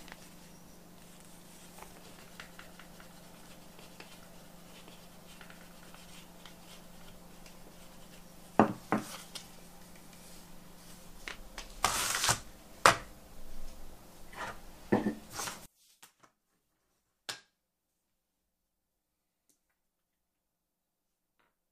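From 15.66 s to the end, one stereo channel has likely been inverted, its polarity reversed, so material common to both sides cancels when summed. The centred content drops by about 30 dB, leaving only a faint residue of the channel difference.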